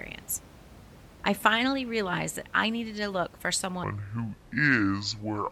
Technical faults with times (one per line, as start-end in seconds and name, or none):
3.84-5.51 section at the wrong speed